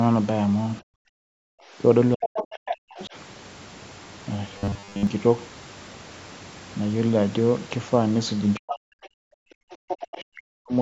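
From 0.81 to 1.01 s the speech briefly sinks by a deep amount, roughly 40 dB. This is speech suppressed in double talk, likely because the echo canceller could not tell the near talker from loudspeaker echo and turned both down.

From 1.31 to 1.77 s the background gated by the echo canceller drops out by about 40 dB, then returns. Here only the room sound vanishes while the loudspeaker plays, not the talker's speech.

From 2.15 to 3.15 s the speech again dips and breaks up, likely under double talk. From 2.25 to 3.06 s the other side's voice leaks through only about 5 dB below the talker. This second voice comes in addition to the talker rather than replacing them.

From 4.58 to 5.07 s the speech turns into a rigid metallic buzz at 100 Hz. That is robotic sound from repeated short buffers, fitting a 10 ms buffer replayed for most of the stretch. It is a fixed pitch, not a level drop.

From 8.58 to 10.75 s the speech is cut down in pieces for about two seconds. 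Between 9.71 and 9.97 s the other side leaks in, roughly 10 dB under the speech. The call microphone processing takes out only the lowest bass throughout, which is normal.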